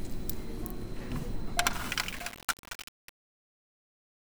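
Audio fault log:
1.73 to 4.32 s, truncation distortion on a fade: the fade-out is held at about 7 bits without dither, so its quiet tail steps coarsely and turns gritty.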